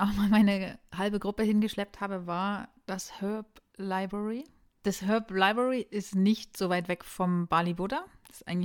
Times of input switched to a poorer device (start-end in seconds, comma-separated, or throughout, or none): none